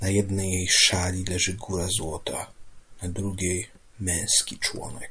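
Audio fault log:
Nothing to log here; the speech comes through without anything worth flagging.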